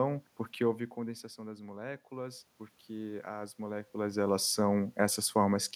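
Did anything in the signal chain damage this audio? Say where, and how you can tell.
Yes. The call-processing stage shows automatic gain rising. Just after "porque houve", the input drops by about 13 dB. From 0.96 s to 3.97 s the gain climbs by about 5 dB. Voice and room noise swell together. That points to gain control, not the talker.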